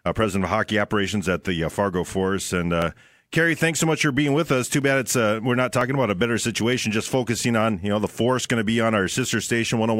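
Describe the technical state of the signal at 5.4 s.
At 5.4 s the speech sits inside a run of periodic USB or driver dropouts lasting from 2.82 to 6.81 s. Once a second the audio path stalls. About half a millisecond of signal is skipped. Each gap is heard as a regular tick.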